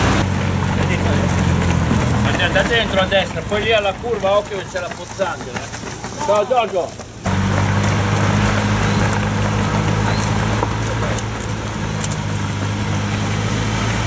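No technical faults can be heard anywhere in the audio; the signal stays continuous and stable throughout.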